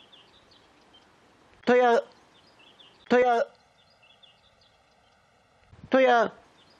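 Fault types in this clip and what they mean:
Channel delay (comb filtering): From 3.22 s to 5.72 s, one channel arrives late by roughly 1.5 ms, and the two channels are summed to mono. The shared content cancels at regularly spaced frequencies. The first notch falls near 300 Hz, and further notches repeat about every 650 Hz above it. The sound turns hollow and phasey over that stretch, with a fixed comb of dips in the spectrum.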